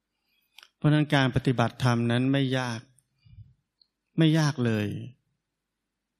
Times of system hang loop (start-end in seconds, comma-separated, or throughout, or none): none